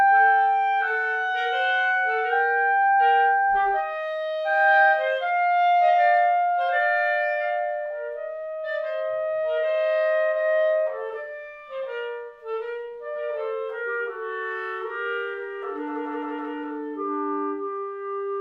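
No technical faults are audible anywhere here.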